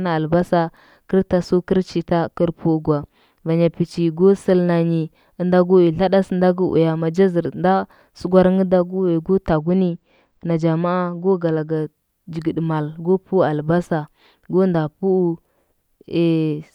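Channel delay (comb filtering) from 9.54 to 11.76 s: one channel lags by roughly two samples, and summing to mono notches the spectrum near 10 kHz, dulling the speech.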